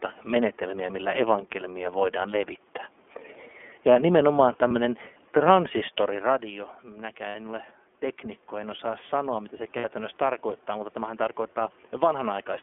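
Throughout the recording the speech carries plainly audible iLBC codec damage. Everything is confined to a narrow telephone band of roughly 250 Hz to 3.4 kHz, so a spectrogram shows an empty band above 3.4 kHz and almost nothing under 250 Hz. Each block of excitation is coded independently, and the result is a slightly rough, synthetic edge on the voice. The room's background noise is also thinned and smeared by the coding. The block structure fits the 30 ms frame mode at 13.33 kbps.

Lost iLBC frames occur three times. The first is one frame, about 30 ms, at 4.68 to 4.72 s. The next two are two frames each, about 60 ms, at 7.28 to 7.36 s and 9.77 to 9.85 s. In each gap the decoder repeats the last pitch period mixed with noise, so the audio briefly holds on a buzzy, breathy vowel-like tone. On a spectrogram the harmonics run flat and unchanging with hazy noise between them. The waveform shows near-identical repeated cycles that soften in the longer losses. 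The voice is back to normal almost immediately after each gap.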